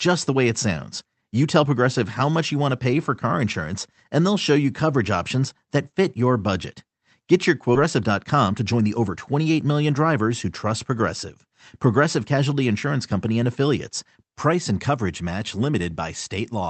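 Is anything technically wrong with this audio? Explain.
Yes, two faults in a row. At 7.75 to 7.77 s, a skip ahead drops about a second of queued audio; the waveform splices both sides together with no silent gap, a hard seam on the spectrogram. From 8.01 to 9.33 s, just before "million drivers who trust", a jitter buffer speed-up trims pitch periods to shed about 100 ms, playing 108% fast at unchanged pitch; the spectrogram shows syllables bunched closer. Throughout, the call codec's spectrum stops near 8 kHz.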